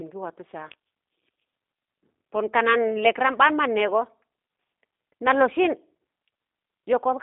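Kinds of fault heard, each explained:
G.729 codec: A low-rate speech codec that discards the waveform and resynthesises the speech from a vocal tract filter, a pitch predictor and a few fixed pulses per short frame. The sound fits the 8 kbit/s G.729A variant. Throughout the clip the speech is confined to a telephone band of roughly 250 Hz to 3.7 kHz, with nothing above that, and it carries a plainly audible rough, synthetic texture from the pulse-based reconstruction.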